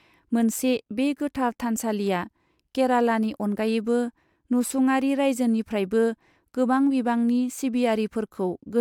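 No technical faults are audible.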